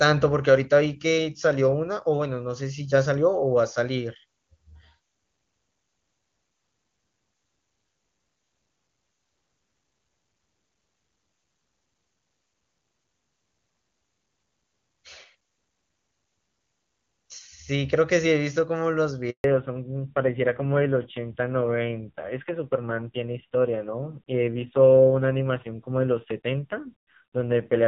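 At 19.30 s there's a handover gap: the call hops networks and no speech frames arrive for about 140 ms, until 19.44 s. The speech cuts off abruptly into dead silence, and whatever was said in that stretch is simply gone.

Right as the link comes back at 19.44 s, there's a fallback to narrowband. The speech drops from HD Voice to an old narrowband codec, and from there to the end nothing above 4 kHz survives. It sounds muffled and a bit gritty, which fits a low-rate AMR-NB mode around 5.9 kbit/s, where before it had the crisp, clean top end of AMR-WB at 23.85 kbit/s.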